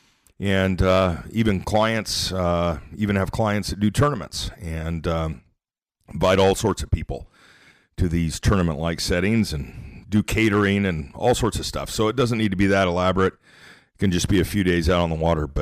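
The speech is driven about 7 dB past what the path can pass, so from start to finish the loudest peaks are sliced flat. This is hard clipping. Only a small share of the waveform, around one percent, hits the ceiling, but each flattened top sprays harmonics high into the spectrum. The result is a gritty crackle riding on the peaks rather than a constant fuzz.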